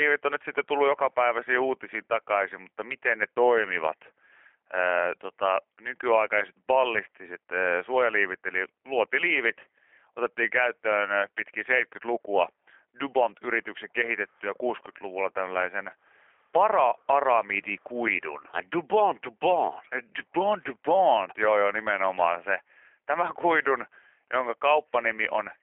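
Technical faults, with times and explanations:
Throughout, G.729 codec: rough, slightly synthetic speech with nothing above 3.7 kHz, because each 10 ms frame is rebuilt from a vocal-tract filter, pitch predictor and sparse pulses.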